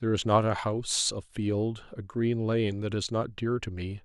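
No technical faults are audible.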